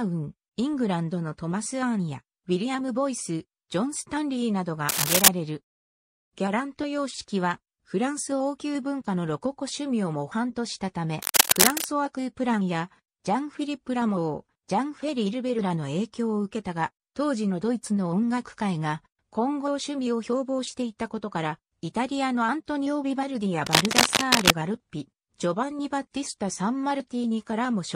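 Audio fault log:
4.89–5.28 s, 11.20–11.86 s and 23.66–24.51 s: cable scratch noise. Three short bursts of dense, ragged crackle sit on top of the sound, a little louder than it. This is likely a worn cable or connector being moved, so its contact flickers and spits noise.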